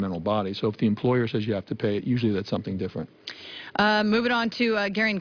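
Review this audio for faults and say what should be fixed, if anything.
No faults can be heard anywhere in this audio, so nothing needs fixing. It can be left as it is.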